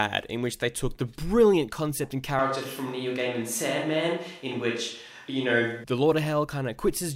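At 2.39 s, just after "the brilliant concept and", the speech abruptly turns roomy and hollow with thinner bass, then snaps back at 5.84 s. This is a switch to a distant microphone, likely from the close mic dropping out. The level barely changes, and room noise sits roughly 35 dB below the speech.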